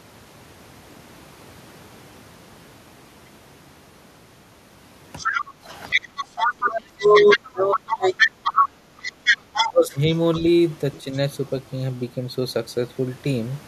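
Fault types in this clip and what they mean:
Other side's voice leaking through: The echo canceller likely failed to remove the loudspeaker signal from the microphone, so the far talker is heard from 5.17 to 9.68 s at only about 5 dB below the near talker, with faint scraps near 10.34 s and 10.95 to 11.16 s.
Background gated by the echo canceller: While the loudspeaker played, the canceller clamped the microphone down, so the room background dips by about 9 dB between 5.46 and 6.26 s, for a total of roughly 400 ms, then comes back when the suppression releases.
Speech suppressed in double talk: With both sides talking at once, the canceller likely mistook the near talker for echo and attenuated both, so the talker's level drops by around 25 dB from 6.55 to 8.16 s, about 20 dB from 9.48 to 9.96 s, and briefly near 11.0 s.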